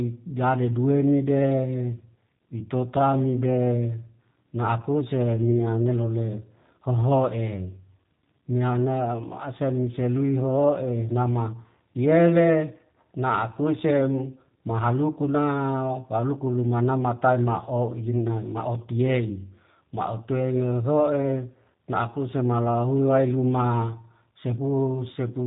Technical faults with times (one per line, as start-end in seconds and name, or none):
0.00-25.46 G.729 codec